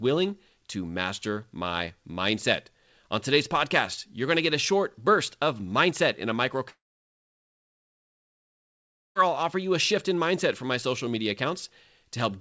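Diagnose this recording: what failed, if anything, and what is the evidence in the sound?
The network stage failed: a long network dropout, likely a burst of lost packets on the call link. Right after "of mindset in a" at 6.70 s the speech stops, the receiver briefly smears the last sound into a fading buzz, and then there's roughly 2.4 s of near-silence until 9.17 s, where it picks up at "I'll offer you a". About 2.46 s of audio is simply gone. The band stops at 8 kHz throughout, which fits a G.722 call codec.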